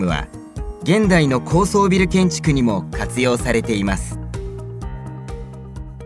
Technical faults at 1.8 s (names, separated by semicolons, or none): none